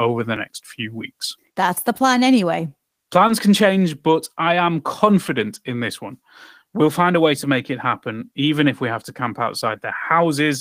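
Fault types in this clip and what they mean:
Dropped buffer (overrun): A small jump in the sound is heard at 0.36 s, just before "next few weeks". A few milliseconds seem to be missing. The likely cause is samples being overwritten before they were read, with the two sides joined directly.
Short concealed packet loss: Between "the plan anyway" and "can change but I", at 3.27 to 3.31 s, there is a brief smear. About 20 ms of audio never arrived. The receiver filled the gap by extending the previous sound, then blended back.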